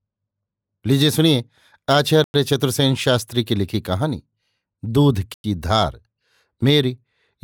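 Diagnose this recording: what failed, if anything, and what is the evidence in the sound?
Two short, hard-edged holes cut into the speech, at 2.24 to 2.34 s and again at 5.34 to 5.44 s, each about 100 ms of silence. They fall 3.1 s apart, which fits audio handled in 3-second chunks with a 100 ms pause at each join. This is a gap between chunks at the playback or transport stage: no sound is dropped, but the speech is pushed apart at the seams.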